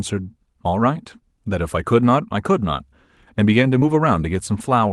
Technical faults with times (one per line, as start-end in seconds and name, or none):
3.79-3.83 short concealed packet loss